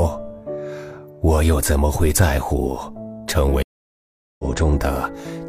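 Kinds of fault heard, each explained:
Stream reconnect: The connection dropped, so the sound cuts to silence at 3.63 s for about 0.76 s. A fresh decoder then picks up the live stream at a later point. Roughly 0.7 s of material is skipped, so the audio resumes further on than where it stopped.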